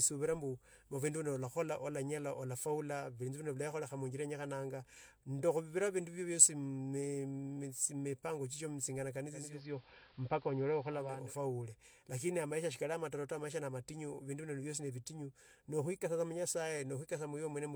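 Just after "mipango chicho mutei", at 9.25 s, the speech shows digital radio blending to analogue. The receiver lost its digital signal and cross-faded over about half a second to the station's AM broadcast. The sound turns dull. The level shifts by about 2 dB. A faint hiss sits around 30 dB under the speech. At 11.37 s it blends back to digital, and the full treble returns.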